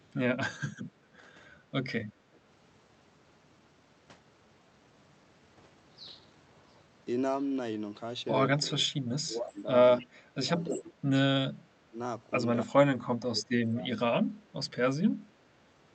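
Echo leak, 0.01 to 0.12 s: a faint delayed copy of the speech, about 40 dB below it, trails the talker by 299 ms. This is likely a loudspeaker on the far end whose echo canceller let part of its microphone pickup through and sent it back.

Speech suppressed in double talk, 1.18 to 1.24 s: a brief, shallow dip of roughly 5 dB. The likely cause is the echo canceller mistaking overlapping talk for echo and turning the talker down.

Speech suppressed in double talk, 8.64 to 9.69 s: a deeper dip of around 20 dB across roughly 0.7 s, again likely from the canceller confusing simultaneous talk with echo.

Echo leak, 9.99 to 10.05 s: the 299 ms echo returns at about 25 dB under the speech, likely leaking past the same canceller.

Speech suppressed in double talk, 10.01 to 10.93 s: the talker drops by up to about 25 dB over roughly half a second, likely as the canceller ducks both sides during overlap.

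Echo leak, 10.64 to 10.81 s: the loudest echo in the clip, only about 10 dB below the speech and still 299 ms late, likely a stronger residual slipping through the canceller.

Speech suppressed in double talk, 11.9 to 11.99 s: a short dip of roughly 15 dB, likely from overlapping talk being treated as echo.

Speech suppressed in double talk, 12.64 to 14.6 s: the longest episode, with the talker chopped down by up to about 25 dB for around 1.5 s in total, likely the canceller suppressing the talker while both sides speak.

The call path's Opus coding limits the audio to about 8 kHz throughout.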